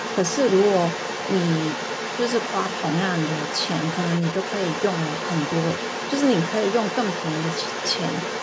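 Other side's voice leaking through runs from 0 to 8.4 s of this speech clip: a second, fainter voice sits roughly 10 dB under the main talker throughout. This is likely residual echo, where the far end played on the talker's loudspeaker was picked up by the microphone and not fully cancelled. The call microphone processing limits the band to about 8 kHz.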